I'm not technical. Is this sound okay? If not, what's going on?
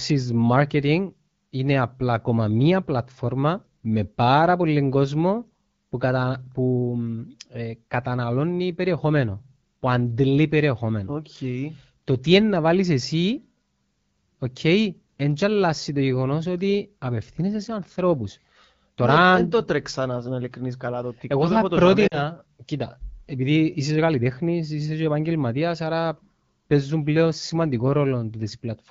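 No. Lost AMR speech frames cause a short glitch from about 22.07 to 22.18 seconds. Radio interference corrupted a brief piece of the call, roughly 40 milliseconds' worth, which fits two lost frames. The phone's decoder filled the gap by repeating the last good sound while fading it down, so the voice quickly drops to near silence. The voice then returns weak or rough for a moment before settling back into the clear HD Voice quality.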